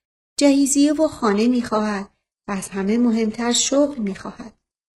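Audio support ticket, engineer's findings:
Sudden quality drop at 1.03 s in the speech, lasting to the end of the clip. No gap at the switch. Treble thins and turns synthetic, nothing above 11.5 kHz, codec artefacts rise. Probable component: adaptive stream at a lower bitrate. Player switched to a low-bitrate rendition when throughput fell. Sound points to a move from roughly 96 kbit/s AAC to a 12 kbit/s HE-AAC tier.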